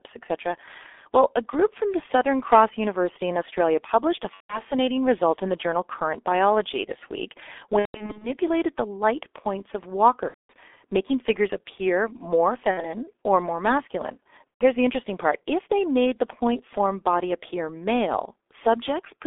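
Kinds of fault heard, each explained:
G.723.1 codec: heavy low-rate coding damage, consistent with roughly 6 kbit/s, band-limited to 250 Hz–3.6 kHz, leaving the speech muffled and hoarse with blurred consonants.
VoIP packet loss concealed by the speech codec: the decoder extrapolates over lost packets, giving fading buzzy or noisy stretches at 4.34, 7.79–8.30, 10.28, 12.71 and 14.50 s.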